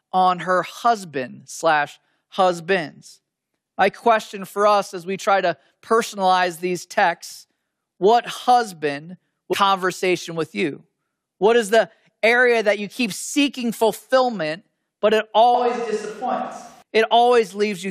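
At 9.52 s the speech lurches forward with a quick blip, which sounds like a stream segment skipped: most likely one chunk of the stream never loaded, so the player jumped straight to the next and a stretch of talk is simply gone.

From 15.54 to 16.82 s the voice suddenly goes roomy and hollow, thinner in the low end and roughly 5 dB quieter, with room noise creeping up to around 30 dB under the speech. That's a switch to a distant microphone, likely because the close mic dropped out and something further away took over before it snapped back.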